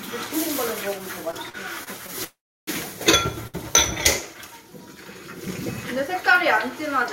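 A recording of everyday sounds, with three playback faults. Repeated stalls (stutter) run from 1.31 to 2.10 s: five brief holds, the longest 42 ms, add about 109 ms of stretched sound. Packets kept arriving too slowly, so the jitter buffer emptied repeatedly and the receiver extended the last sound each time. Nothing is lost, but about a seventh of that stretch drags. A call audio freeze follows from 2.24 to 2.69 s. The last sound is carried on, then dies away into roughly 330 ms of silence before the audio resumes exactly where it stopped, inserting a 431 ms gap. The likely cause is packets held up in transit, draining the jitter buffer. A short stall from a late packet occurs at 3.47 to 3.56 s: one packet missed its playout slot, so the receiver held the preceding sound for 64 ms, audible as a slight smear or dip, then continued without dropping anything.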